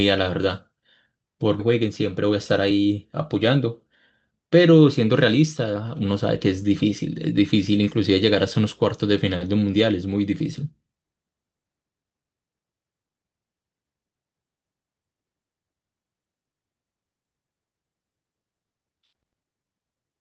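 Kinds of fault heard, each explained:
Skip ahead: at 1.6 s playback jumps straight forward with no gap, dropping roughly a second of speech that was lost on the way or discarded by the jitter buffer while later audio was already queued, so the two sides of the missing stretch butt together almost directly.
Jitter buffer speed-up: from 1.69 to 2.93 s the receiver trims short pitch-period pieces repeatedly to shed its surplus delay, removing about 70 ms in total, so the speech runs at 106 percent speed at unchanged pitch and sounds slightly hurried.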